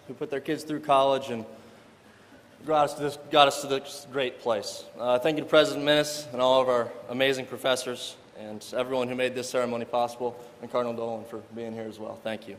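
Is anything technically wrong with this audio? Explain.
No, nothing technically wrong turns up here; the audio runs along without any glitches or problems worth pointing out.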